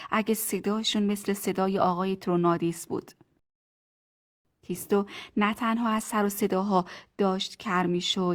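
Playback of this speech clip halted when the player ran out of downloaded audio, a rebuffering stall from 3.39 to 4.45 s. The sound cuts to silence for 1.06 s, then resumes exactly where it stopped, adding time without losing anything.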